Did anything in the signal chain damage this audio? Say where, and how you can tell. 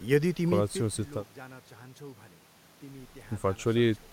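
No, nothing in the chain from capture through playback has left an audible mark on this speech; every stage checks out by ear.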